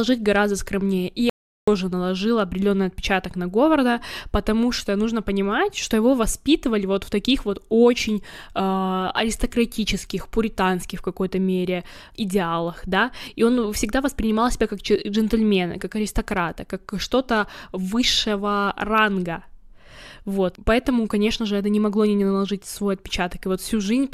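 A speech recording with two kinds of fault. At 1.30 to 1.68 s there is an audio dropout to silence: about 0.38 s of silence before "наложило определенный отпечаток на", likely from a lost input. It shows as a flat line and a blank spectrogram gap with no room tone. Overlap between stream segments causes brief skips at 11.29 s, between "аристократичных романтических пуританских в" and "мере идеалах да и", and at 19.26 s. Overlapping time stamps on 2-second segments trim a few milliseconds, leaving a waveform discontinuity.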